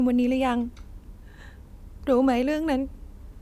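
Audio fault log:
No fault is heard anywhere in this speech clip. The log has nothing to record for it.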